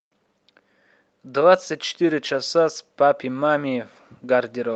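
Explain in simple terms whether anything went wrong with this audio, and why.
From 1.29 s to the end, there's automatic gain rising: the call's level control thinks the speech is too quiet and gradually turns everything up, background included.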